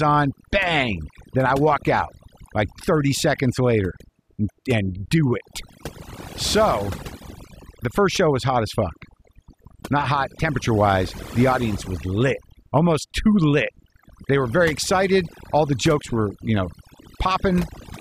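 A speech recording runs from start to finish with overdone noise removal: a noise reducer set far too aggressively has pulled individual frequency bands down to nothing wherever they sat close to its noise estimate. The gaps between phrases collapse to near silence dotted with twinkling specks, and softer parts of the voice vanish with the noise. Unlike a noise gate, the suppression acts band by band, not on the whole signal at once.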